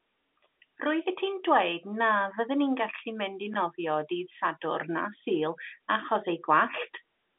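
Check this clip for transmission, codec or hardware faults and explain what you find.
No faults are audible in this telephone-band speech.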